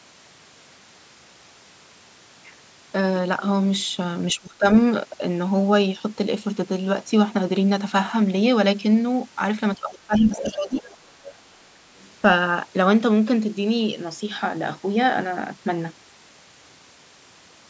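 At 4.33 to 4.66 s and again from 9.76 to 10.85 s, the echo canceller likely mistook double talk for echo and turned the speech down by roughly 20 to 25 dB. The voice sinks for about a third of a second, then a full second. Overlapping and following that second dip, the canceller likely left residual loudspeaker sound in the microphone signal, so the other side's voice leaks through in brief scraps at 10.36 to 10.55, 10.79 to 10.96, 11.23 to 11.35 and 11.97 to 12.11 s. The first is fairly prominent, and the later ones are faint.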